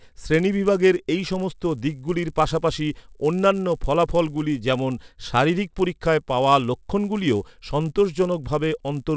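Speech runs over a steady 100 Hz buzz that's there only while sound is, a resampler restarted on every block: each 10 ms block converted separately, likely 44.1 kHz to 16 kHz, leaves an edge error.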